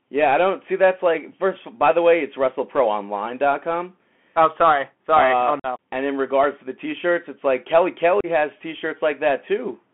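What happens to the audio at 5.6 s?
Between 5.60 and 5.66 s there is unconcealed Bluetooth headset packet loss. About 45 ms of voice data, which fits roughly ten short packets, never arrived and was replaced with silence or an idle pattern, so the speech drops into a brief hole with abrupt edges.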